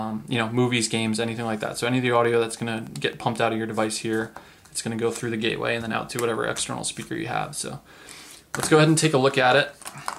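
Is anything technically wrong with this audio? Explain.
Yes. A train of clicks runs from 2.07 to 3.14 s: about fifteen evenly spaced pulses at 11.3 per second, likely from interference by nearby equipment or a faulty connection or power supply. Each click has the same shape and peaks roughly as loud as the sound itself, so it reads as a steady ticking over it.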